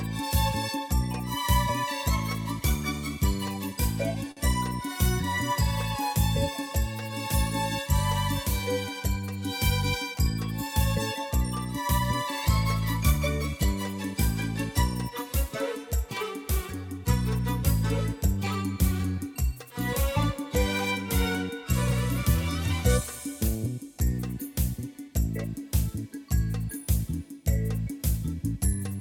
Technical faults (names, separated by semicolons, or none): short stall from a late packet